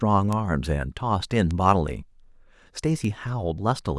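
A speech clip with three bit error spikes, at 0.33 s, 1.51 s and 3.05 s. Each is one sharp, broadband tick. The first peaks at about -13 dBFS, the others at about -19 dBFS. A flipped bit jumps one or two samples by a power of two, then returns.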